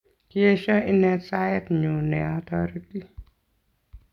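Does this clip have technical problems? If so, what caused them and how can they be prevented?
No, nothing stood out on listening to this speech clip, so there is no cause to trace and nothing to prevent.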